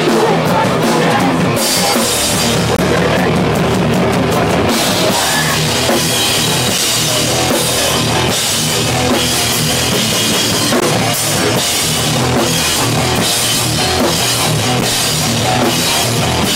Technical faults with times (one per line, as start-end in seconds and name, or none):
2.77-2.79 gap between stream segments
6.78 gap between stream segments
10.80 gap between stream segments
14.81 gap between stream segments